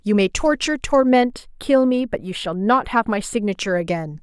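From 1.09 to 3.52 s, channel delay (comb filtering) sounds hollow or phasey. A lag of about two samples notches the mono sum near 7 kHz, showing as a dark horizontal spectrogram band.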